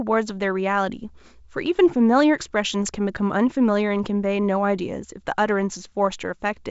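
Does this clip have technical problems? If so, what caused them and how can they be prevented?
No, nothing here needs fixing or preventing.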